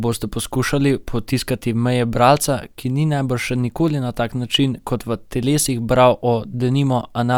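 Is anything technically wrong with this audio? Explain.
No, nothing technically wrong turns up anywhere in this speech recording, so there's nothing here to flag.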